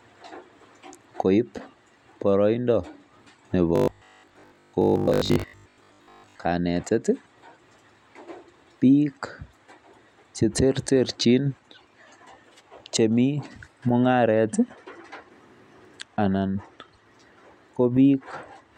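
A likely shortfall of incoming audio, with the playback software filling the gaps by looping the last short buffer, produces robotic sound from repeated short buffers in this speech recording between 3.76 and 6.46 s. Most of that stretch, roughly seven tenths, is repeated material rather than new audio. The repeats impose a fixed 50 Hz buzz, which fits a loop about 20 ms long, so the voice becomes a rigid, metallic drone that only loosely tracks the talking.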